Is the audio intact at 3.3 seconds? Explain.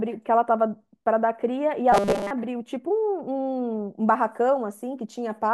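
Yes, at 3.3 seconds the speech plays through intact, with no dropout, click, distortion or other fault at that moment.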